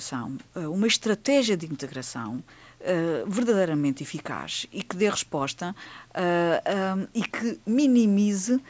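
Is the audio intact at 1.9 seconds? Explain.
Yes, at 1.9 seconds the speech is intact, with only the ordinary call microphone processing audible, trimming the lowest bass and leaving nothing above 8 kHz.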